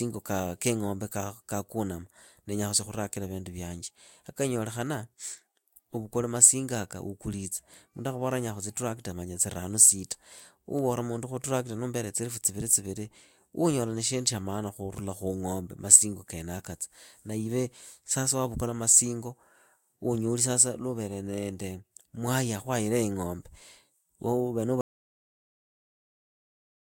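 Speech recording with an audio dropout to silence from 24.81 s to the end: the sound cuts abruptly to silence with no room tone, unlike a fade or gate, likely from a lost input.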